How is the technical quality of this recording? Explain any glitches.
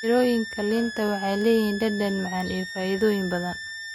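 A switching supply whistle runs through the whole recording and is its main technical flaw. Across the entire speech clip a high tone sits between about 1.7 and 1.9 kHz, roughly 10 dB below the speech. A switching power supply feeding the recording chain has dropped into an audible burst mode, or is beating against another supply, and its switching frequency has leaked into the audio. It differs from mains hum, which lies far lower as a buzz at 50 or 60 Hz and its harmonics. It also differs from a fixed test tone, because its pitch wanders within that band instead of holding one exact frequency.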